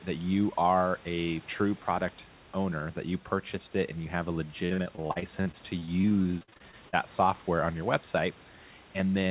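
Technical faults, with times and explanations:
4.66–6.95 s: repeated packet loss (robotic sound). The speech breaks into a rapid string of short holes, the longest about 51 ms, each patched by extending the previous sound. Roughly a quarter of the stretch is filled in this way, giving a choppy tone rather than one clean dropout.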